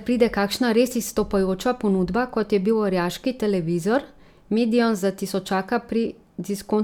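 Listening closely to the recording turned up nothing that stood out.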